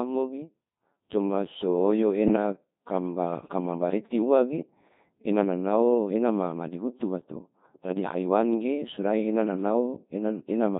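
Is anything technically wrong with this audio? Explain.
Yes. Throughout, the speech sounds robotic and buzzy with heavy damage, typical of the Codec 2 vocoder at a rate that fits about 2.4 kbit/s: only pitch, voicing, energy and spectral envelope survive, resynthesised from sine waves.

From 2.26 to 2.36 s, just after "coma so oyo", the voice jumps into a warbling, garbled bleep. These are bit errors on digital voice radio, at a rate of roughly 7 percent, scrambling the parameters of what sounds like about two vocoder frames.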